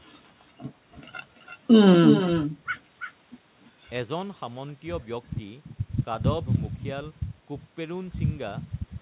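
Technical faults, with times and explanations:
Throughout: echo with no canceller. Every phrase returns roughly 300 ms later, about 7 dB below the direct speech, and thinner, because the far-end loudspeaker feeds its microphone and nothing removes it. Both copies stop at 4 kHz, which fits a G.711 narrowband call path.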